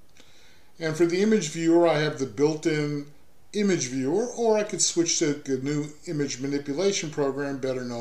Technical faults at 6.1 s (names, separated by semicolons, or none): none